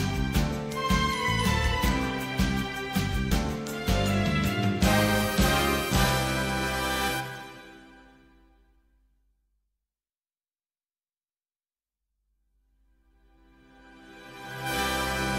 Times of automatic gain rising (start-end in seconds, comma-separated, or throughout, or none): none